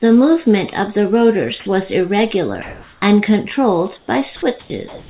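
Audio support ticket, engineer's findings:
Sound dropped by the voice detector, 1.60–1.66 s and 4.60–4.70 s: about 50 ms of speech missing each time, replaced by flat steady hiss, then speech returns. Likely the VAD misread speech as background and the sender paused, with comfort noise inserted at the receiver. Unlike packet-loss concealment, there is no repeated or smeared pitch, only featureless noise where speech should be.

Comfort noise in place of the background, 2.62–3.02 s, 3.98–4.08 s, 4.88 s to end: pause background swapped for smooth, textureless noise, with level steps of about 2 dB, about 3 dB and about 9 dB. The background in these pauses sits roughly 27 to 40 dB below the loudest speech. Likely DTX with receiver-side comfort noise generation. Unlike a noise gate or suppressor, the gap is filled rather than silenced, and it loses the background's detail, not just its level. 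Everything above 4 kHz is absent throughout, which points to a G.711 mu-law call path.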